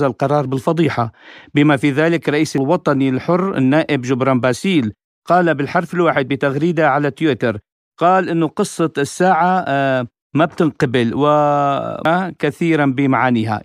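At 2.58 s and again at 12.05 s the speech hits a brief glitch. That's damaged data in a compressed stream: corrupted bytes trip the decoder, which misreads the frame, loses sync and hunts for the next header before recovering.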